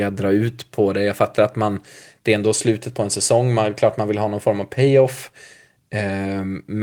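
The speech carries the light coding texture of Opus voice compression in its hybrid, full-bandwidth mode, and no technical fault can be heard in it.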